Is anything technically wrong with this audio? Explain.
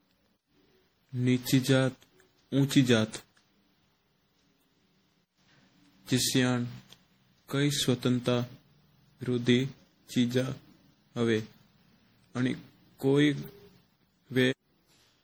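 Yes. Throughout, the speech was likely re-encoded around ten times, consistent with MP3 near 64 kbit/s. This generation loss stacks quantisation noise and spectral holes, leaving swirly, hollow, smeared sound with blurred attacks.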